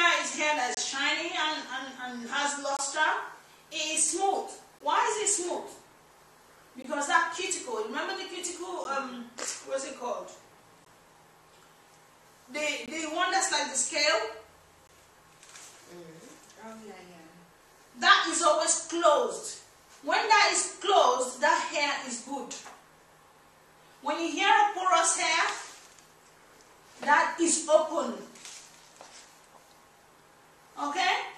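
Gaps between stream segments at 0.75, 2.77, 4.79, 6.82, 8.84, 10.85, 12.86 and 14.87 s: hard-edged silences of 11 to 25 ms, one every 2 s at segment joins. Unlike dropouts, no audio is missing; silence is inserted between segments.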